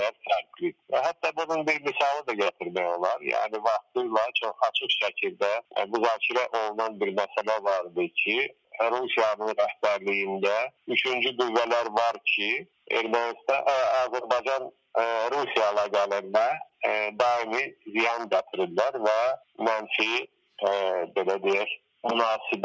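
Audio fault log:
Throughout: noise suppressor applied to music or sounds. A suppressor tuned for speech keeps treating sustained tones, ambience and decaying tails as noise, so their gain rises and falls by about 10 dB while onsets pass mostly intact. The result is a pumping, fluttering thinness. A spectrogram shows held partials fading into dark gaps between bright attack columns, all capped at 8 kHz by the call microphone path. The waveform envelope breathes unevenly.
0.12–5.77 s, 7.29–14.95 s, 16.65–22.04 s: sound cut by the noise suppressor. In each stretch the suppressor judges parts of the sound to be noise and pulls them down by up to about 18 dB. The affected portions add up to about a second in the first and third stretches and about one and a half seconds in the middle one. Steady and fading material sinks or has its decay clipped short, while sharp transients survive. On a waveform this appears as sudden envelope dips and truncated tails. 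A spectrogram shows energy abruptly thinning across the band.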